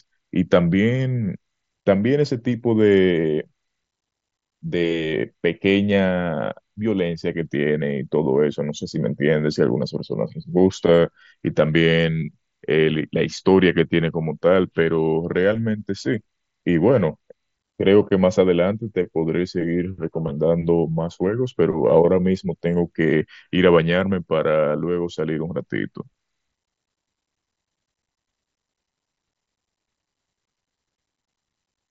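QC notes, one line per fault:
No faults found; speech carried over the Bluetooth mSBC headset codec, with nothing above about 7.7 kHz and a light codec grain on louder passages.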